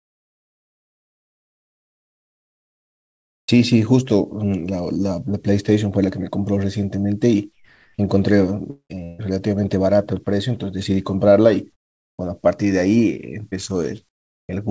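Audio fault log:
0.0–3.48 s, 7.52–7.98 s, 11.72–12.18 s, 14.09–14.49 s: comfort noise in place of the background. The real room sound gives way to a steady, featureless hiss, about 25, 5, 16 and 21 dB quieter. This is likely the sender halting transmission during pauses. Unlike a dropout, the noise never goes fully silent.
3.44–3.48 s: onset clipped by the voice detector. The first 40 ms of speech are missing, so it starts abruptly out of the synthetic noise. This is likely a slow voice detector. Unlike chopping, only the beginning is lost.
8.70–9.20 s: sound chopped by the voice detector. About 340 ms of speech is replaced in pieces, so syllable edges drop out. This is likely repeated switching on and off. Unlike onset clipping, it happens inside the speech.
13.50–13.54 s: short concealed packet loss. About 20 ms never arrived, and roughly 12 ms was filled by extending the preceding sound, giving a brief smear or wobble. 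Unlike voice-detector gaps, no hiss replaces it.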